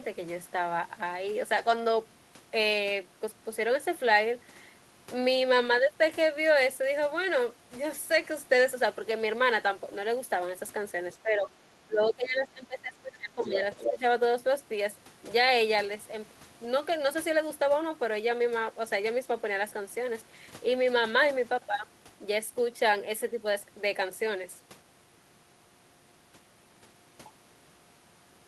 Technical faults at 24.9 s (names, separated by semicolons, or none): none